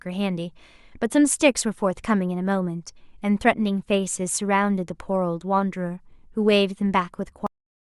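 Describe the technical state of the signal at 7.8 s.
At 7.8 s there is nothing but flat digital silence. The speech stops abruptly at 7.47 s, partway through a sound, with no decay or natural tail, and the signal stays dead until the clip ends at 7.99 s. This is a cut-off end: the final buffers of audio were never written or played out, so the sound is truncated mid-sound and the last half-second or so holds only silence.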